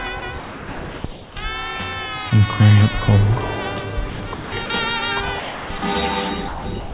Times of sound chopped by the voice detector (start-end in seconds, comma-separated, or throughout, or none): 0.20-1.36, 4.10-4.70, 5.40-5.82, 6.48-6.94